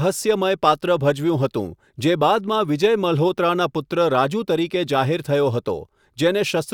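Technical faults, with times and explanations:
No technical fault can be heard anywhere in the speech. There is nothing here that needs a time or an explanation.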